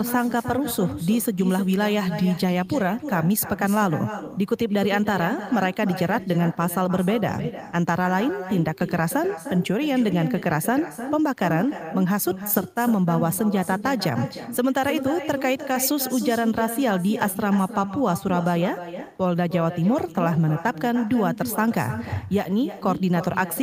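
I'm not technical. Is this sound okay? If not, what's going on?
No. Right through the recording, every bit of speech is followed about a third of a second later by a fainter, thinner copy of itself. That is echo with no canceller: the far end's loudspeaker feeds its microphone, and nothing strips that returning sound out.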